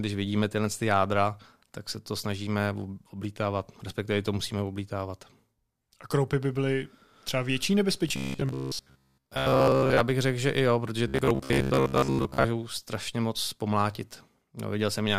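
From 8.09 to 10.05 s, after "by byly třeba větší", and from 11.08 to 12.44 s, after "že i jo protože", the speech becomes a rigid metallic buzz at 66.8 Hz. This is robotic sound from repeated short buffers, with most of the audio replaced by repeats of a segment that fits a 15 ms buffer. The likely cause is audio arriving too slowly.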